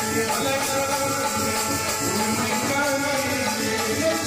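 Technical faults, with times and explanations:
1.50 to 2.73 s: GSM phone buzz. A hard, raspy 217 Hz buzz with dense harmonics, unrelated to the sound, sits at about -11 dB relative to the signal and stays steady, as during a call. The audio circuitry is rectifying a nearby 2G phone's pulsed transmissions.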